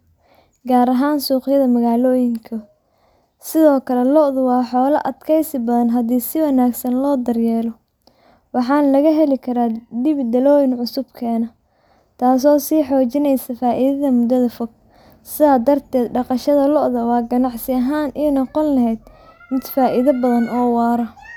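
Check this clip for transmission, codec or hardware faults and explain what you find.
No transmission, codec or hardware faults.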